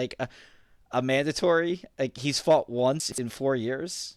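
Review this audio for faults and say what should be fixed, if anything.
A brief jumbled stutter from 3.0 to 3.18 s, just after "he's fought": chunks out of order, with one 60 ms chunk playing two chunks late. Fix it by reordering buffered chunks by sequence number or timestamp before playback or writing.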